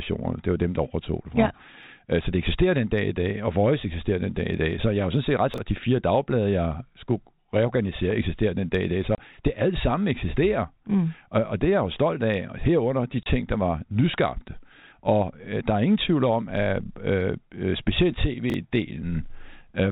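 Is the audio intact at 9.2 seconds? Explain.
No. From 9.15 to 9.18 s, just before "det alt sammen eksisterer", a single 30 ms packet was lost in transmission and the receiver filled the gap with silence. The speech drops out abruptly for that instant, with a hard cut at each edge.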